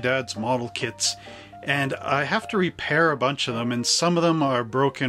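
Nothing stood out as a technical problem on listening to the clip.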